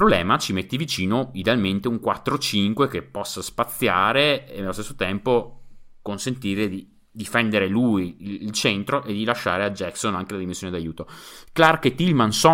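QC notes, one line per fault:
No technical faults are audible anywhere in the speech signal.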